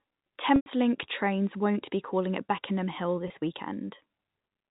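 At 0.56 to 0.66 s, just before "trains won't be calling", packet loss with pitch repetition fills a 100 ms gap: the receiver loops the last pitch period, so the sound turns buzzy, fades toward silence, then cross-fades back. At 3.28 to 3.30 s a 20 ms loss, about one packet, leaves only a brief held buzz. Unlike a plain dropout, neither gap is empty or clicked; each is bridged by repeated pitch within the narrowband G.711 telephone channel.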